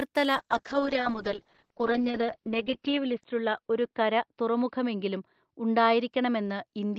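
A call bitrate drop sets in at 0.36 s and lasts to the end of the clip. The bandwidth estimate fell, and the encoder was given far fewer bits to work with, a rough, coarse texture that fits a fall from around 32 kbps to about 9 kbps. At that rate the codec also narrows the audio band from 20 kHz to 4 kHz, so the speech turns muffled and watery, staying at its worst for about 2.6 s without recovering.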